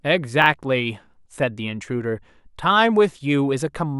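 At 0.42 to 0.46 s there are chunks out of order: one 20 ms chunk lands a chunk late, swapping places, so you get a brief jumbled blip.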